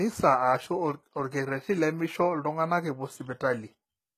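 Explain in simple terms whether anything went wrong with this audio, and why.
The speech sounds gritty and metallic on its s sounds for the whole clip, likely from HE-AAC compression. The treble is rebuilt from lower sounds rather than kept, so it stays bright instead of dull, unlike simple muffling, but sounds fake and lispy.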